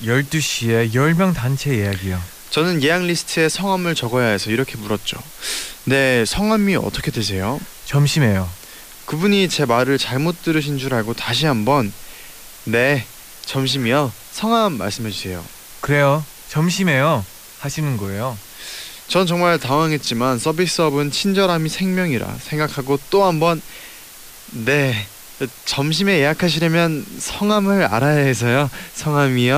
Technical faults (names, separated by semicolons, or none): low bit depth with dither